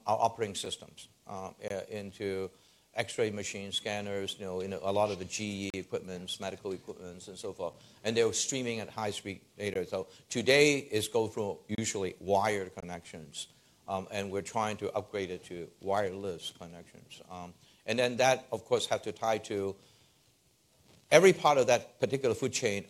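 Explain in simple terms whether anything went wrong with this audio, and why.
Six brief, hard-edged silent holes interrupt the sound: at 0.65 s, 1.68–1.70 s, 5.70–5.74 s, 9.74 s, 11.75–11.78 s and 12.80–12.83 s. This is a gap between stream segments. The audio arrives in pieces that fit one-second chunks, and where two pieces don't line up, the player fills the space with silence. Nothing is lost.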